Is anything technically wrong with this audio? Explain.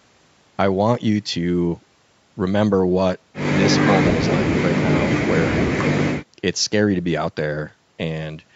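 No, this speech has no technical fault: it carries the normal marks of a call's microphone processing, with the lowest bass rolled off by the high-pass filter and nothing present above 8 kHz.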